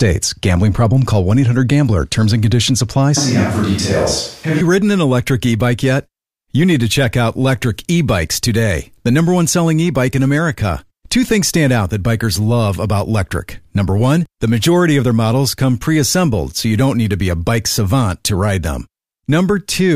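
Switch to a distant microphone, 3.17 to 4.61 s: speech abruptly turns roomy, hollow and bass-light with faint room noise, likely from the close microphone dropping out.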